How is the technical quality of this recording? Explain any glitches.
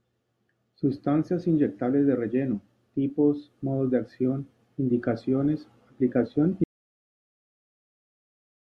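The recording has one glitch. Audio dropout to silence at 6.64 s, after "de acción indicaciones aplicación": the input was likely lost, leaving complete silence without room tone until the end.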